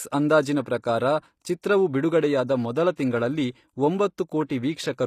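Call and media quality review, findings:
Throughout: HE-AAC compression, plainly audible on this speech. Likely cause is spectral band replication: treble is copied up from lower bands and shaped only roughly, so sibilants come out gritty and lispy, and harmonics don't line up across the crossover. Nothing above 14.9 kHz. The damage level fits a low bitrate, around 24 kbps.

Pre-echo at 2.96 s and 4.49 s: a short burst of hiss just before a sharp attack, about 15 ms and 12 ms long. Same transform codec. The coder spreads quantisation noise across the whole block, so noise meant for the loud onset also fills the quiet gap before it. Attacks sound soft and smeared.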